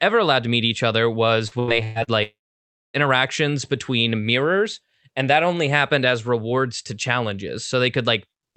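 Repeated packet loss (robotic sound) runs from 1.47 to 2.10 s, just after "to meet each other". Four short holes, the longest about 119 ms, are each patched by stretching the preceding sound, so nearly half that span turns choppy, with pieces missing.

A long network dropout follows from 2.23 to 2.97 s. The last sound is briefly carried on as a fading buzz, then roughly 0.6 s of near silence before the audio resumes without the missing part, likely a stall in packet delivery. The concealment sounds band-limited to about 8 kHz, which fits an Opus call path.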